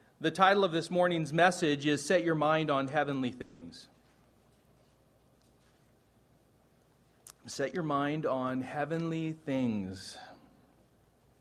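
From 3.41 to 3.63 s, the last sound is stretched into a fading buzz for about 200 ms, then the audio resumes with roughly 200 ms of material missing. This is likely a long network dropout, with the receiver concealing the gap by extrapolation.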